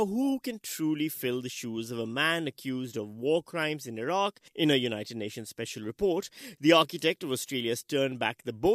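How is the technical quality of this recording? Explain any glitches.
Nothing stood out on listening, with no glitches heard anywhere in the recording.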